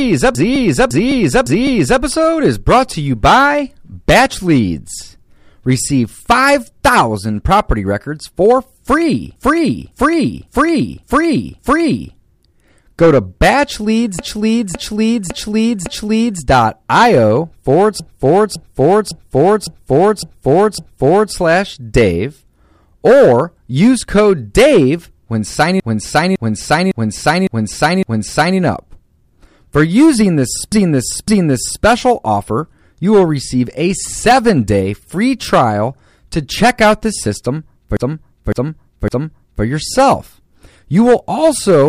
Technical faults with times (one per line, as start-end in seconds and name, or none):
0.00-41.89 hard clipping
0.35-2.02 repeated frames
9.36-12.15 repeated frames
14.19-16.42 repeated frames
18.00-21.34 repeated frames
25.80-28.59 repeated frames
30.72-31.84 repeated frames
37.97-39.64 repeated frames